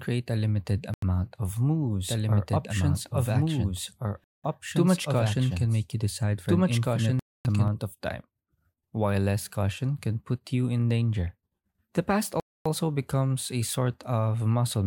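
At 0.94 s the speech drops into a block of digital silence lasting 85 ms, which fits a 4096-sample buffer that was not filled in time. The waveform goes flat, and the spectrogram shows an empty full-height column. It sounds like a short hole.

From 2.09 to 7.68 s there is a doubled audio track. A second copy of the speech runs roughly one and a half seconds behind at about the same level, likely captured again through a slower path. On the spectrogram the speech patterns repeat, shifted sideways and overlapping. Both copies are equally dry, and the copy starts and stops abruptly.

Further blocks of silence fall at 4.24 to 4.44 s (197 ms), 7.19 to 7.45 s (256 ms) and 12.40 to 12.66 s (256 ms). Each one shows the same flat line and blank column.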